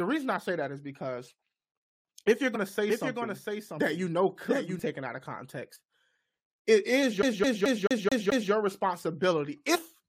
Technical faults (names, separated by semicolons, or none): compressed frames skipped; doubled audio track; CD stuck on one turn